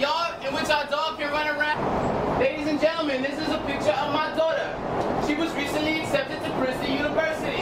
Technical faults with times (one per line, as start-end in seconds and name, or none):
1.73-1.75 skip ahead
4.18-4.50 jitter buffer speed-up